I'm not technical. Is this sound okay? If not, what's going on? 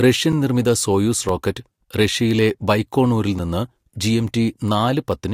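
No. A block of digital silence occurs at 0.32, 1.29 and 3.39 seconds. Each time, about 5 milliseconds of the speech is replaced by complete silence. The sound drops to nothing and comes straight back with no fade, so each gap is far too short to hear as a pause. You hear a small tick or click instead, three times over the course of the clip.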